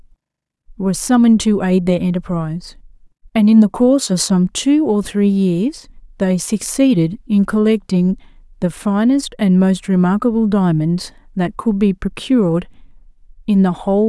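No technical faults are audible.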